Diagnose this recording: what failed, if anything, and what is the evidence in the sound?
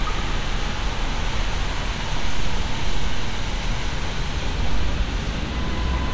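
Nothing failed; no fault is audible in this recording.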